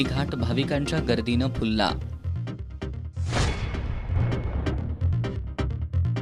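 At 4.16 s there's a sudden gain jump: everything, background noise included, steps up about 5 dB and stays there, likely a gain change applied without a ramp.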